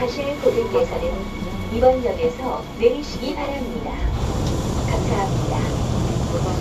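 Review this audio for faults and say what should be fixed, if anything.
No faults; nothing to fix.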